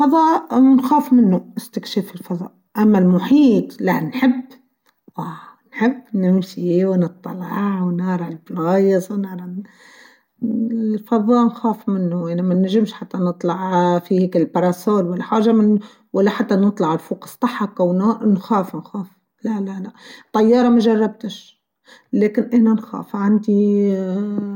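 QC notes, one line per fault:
Nothing to flag on this speech recording, so it can go through without any QC notes.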